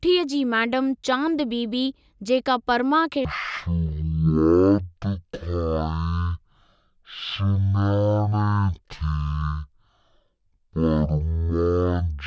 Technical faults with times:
3.25-12.26 wrong sample rate

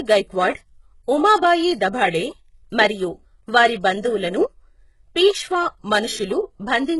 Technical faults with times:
0.00-7.00 HE-AAC compression

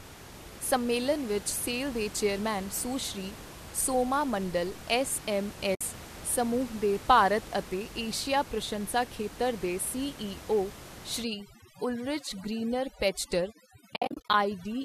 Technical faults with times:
5.75-5.81 AAC frame loss with muting
11.23-14.84 overdone noise removal
13.94-14.34 AAC frame loss with muting

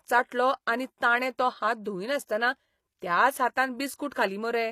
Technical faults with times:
0.00-4.71 HE-AAC compression

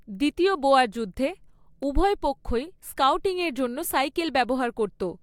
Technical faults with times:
1.83 dropped samples

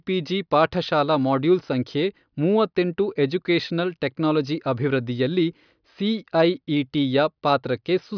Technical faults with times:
none

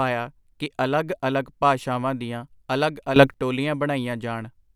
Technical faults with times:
3.16-3.34 sudden gain jump

